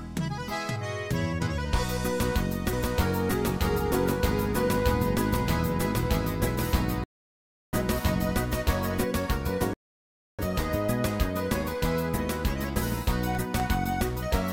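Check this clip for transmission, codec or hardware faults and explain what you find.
Three kinds of fault are audible: a doubled audio track, two rebuffering stalls and a short run of periodic USB or driver dropouts.

From 2.73 s to 9.04 s a second full-band copy of the sound trails the original by roughly 700 ms, about 5 dB quieter. It has no decay or room colour, and it starts and stops abruptly at those two points. This is a doubled audio track. It was likely caused either by the same signal being captured again through a slower path or by an edit that left two copies out of step.

At 7.04 s the sound cuts to silence until 7.73 s. At 9.74 s it cuts out again until 10.39 s. Each time it resumes exactly where it stopped, with nothing missing. These are rebuffering stalls: the player ran out of downloaded audio and waited for more to arrive. The first adds about 0.69 s to the running time and the second about 0.65 s.

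Between 13.35 s and 14.35 s there are evenly spaced ticks every 0.25 s, about five in all. Each is a gap of around a millisecond filled with silence, and they sound only where there is signal. This regular pattern of periodic USB or driver dropouts comes from a background task that blocks the bus or audio driver at a fixed interval, so a sliver of audio is lost each time.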